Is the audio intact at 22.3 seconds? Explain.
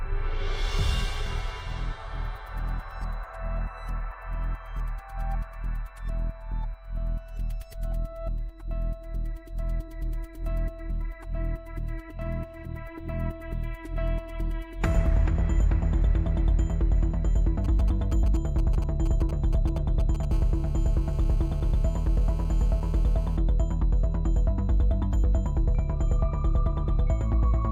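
No. A nearby 2G handset on a call is transmitting in bursts about 217 times a second, and the audio circuit rectifies those radio pulses. The result is GSM phone buzz from 20.31 to 23.37 s: a hard, raspy 217 Hz buzz with many harmonics, about 24 dB below the signal and unrelated to it.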